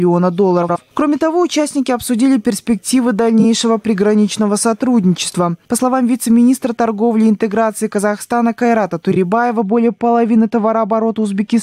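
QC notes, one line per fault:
0.62–0.77 s: frames out of order. Two adjacent blocks of about 64 ms, consistent with runs of three codec frames, were decoded in swapped order, so this stretch plays its halves exchanged. The result is a garbled flutter, and no time is lost.
3.40, 5.30 and 9.11 s (each about 48 ms): frames out of order. Each time, two neighbouring blocks of about 21 ms, consistent with single frames, arrived and were decoded in reverse order. The brief swap causes a quick stutter.
9.61 s to the end: de-emphasis applied wrongly. A treble-cut filter meant to undo pre-emphasis was applied to audio that had none, or was applied twice. The response slopes smoothly down to about 10 dB lower at 10 kHz than at 1 kHz, so this last stretch sounds dull and muffled.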